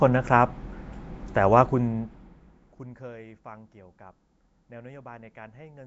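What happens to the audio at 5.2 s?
At 5.2 s the speech carries the same Nellymoser compression damage heard throughout the clip. The likely cause is Flash's Asao codec, at a rate that points to 32 kbps. Coarse fixed bit allocation leaves a rough, hissy, underwater smear. Nothing reaches above 7.7 kHz.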